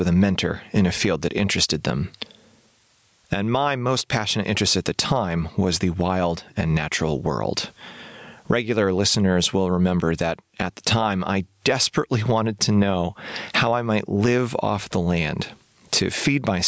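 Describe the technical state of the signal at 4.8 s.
At 4.8 s the speech is caught in gain pumping, which runs through the whole clip rather than at this instant only. The gain ducks by around 20 dB as each loud sound arrives, leaving the level squashed. The likely cause is gain set far too high feeding a fast limiter. Unlike a noise gate, the floor rises instead of cutting to silence. The call's normal processing leaves nothing above 8 kHz.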